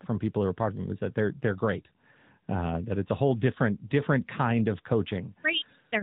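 AMR narrowband mobile codec damage runs through the whole clip, from start to finish. The speech has been squeezed through a phone-style coder that works at 8 kHz sampling, so everything above 4 kHz is gone and the sound is dull and boxed-in. Instead of storing the waveform, the coder rebuilds each 20 ms frame from a vocal-tract model fed by sparse pulses. The plainly audible buzzy, synthetic edge fits a mid-rate mode of about 10.2 kbps.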